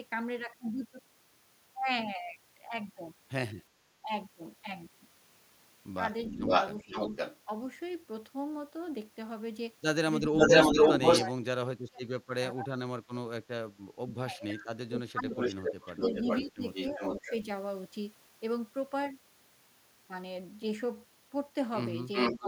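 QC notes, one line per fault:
6.26–22.48 s, echo leak: a delayed copy of the sound returns at 6.26–7.39 s and 10.36–11.27 s, about 513 ms late, and at 15.38–17.35 s and 22.13 s to the end, about 409 ms late. It is roughly as loud as the direct sound or louder. The likely cause is a far-end loudspeaker echo that the canceller failed to remove. A fixed-lag repeat like this is distinct from room reverberation, which decays smoothly.
6.32–22.45 s, speech suppressed in double talk: the direct sound dips, likely while both sides are active. At 6.32–7.16 s it drops by about 15 dB over roughly 0.4 s. At 10.24–17.32 s it drops by about 30 dB, for about 4 s in total. At 22.39–22.45 s it briefly drops by about 10 dB. These dips line up with overlapping talk, which sets them apart from random dropouts.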